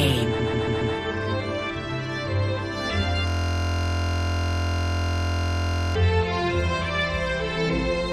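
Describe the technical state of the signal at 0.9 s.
At 0.9 s the signal is inside a repeated frames fault running from 0.38 to 0.94 s. A block of about 139 ms of compressed audio plays four extra times. It is heard as a stutter, and it adds 557 ms to the audio.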